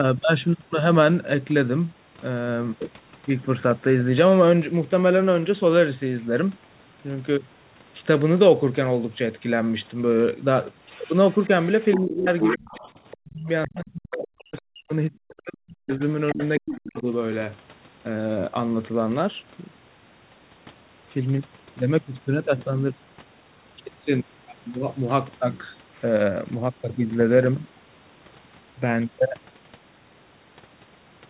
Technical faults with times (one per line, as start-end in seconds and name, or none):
10.89-13.17 other side's voice leaking through
11.97-12.73 speech suppressed in double talk
13.19-16.00 speech suppressed in double talk
13.76-13.80 other side's voice leaking through
14.25-14.61 other side's voice leaking through
15.39-17.12 other side's voice leaking through
16.34-17.07 speech suppressed in double talk